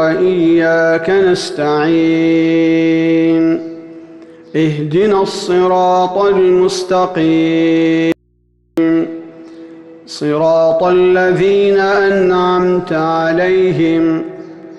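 At 8.12 s the sound drops out abruptly for about 0.65 s, leaving only faint mains hum, very roughly 45 dB down; likely an audio dropout to a faint residue on a live path.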